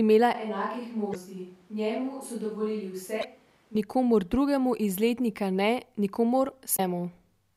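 From 0.35 to 3.75 s the speech turns hollow, roomy and bass-light, about 10 dB quieter with noise roughly 30 dB below it. This is likely a switch to a distant microphone; the waveform drops abruptly, and the spectrogram thins at low frequencies. Damaged data in a compressed stream causes short glitches at 1.11–1.16, 3.20–3.25 and 6.75–6.80 s as the decoder loses sync. Each glitch shows as a brief disturbance.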